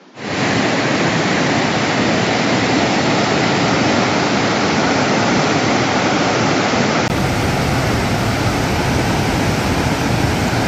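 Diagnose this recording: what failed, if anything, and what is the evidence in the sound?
The input-device stage failed. From 0.00 s to 7.10 s the sound is band-limited, with nothing above 7.6 kHz and a noise floor roughly 30 dB below the signal. A 20 ms gap at 7.10 s then restores full bandwidth at similar level, likely an input switched to a poorer device.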